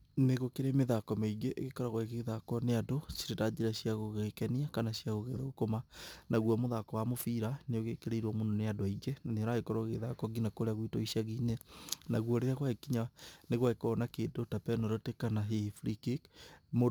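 A fine hiss and grittiness rides on the speech from start to finish, thickening on loud passages and bright, sharp sounds and disappearing in the pauses. That pattern marks sample clock jitter: the converter's timing wanders by something like 7 microseconds, so each sample lands slightly off its proper instant. Where the waveform changes quickly, that timing slip becomes an amplitude error, here roughly 30 dB below the signal, heard as signal-dependent noise.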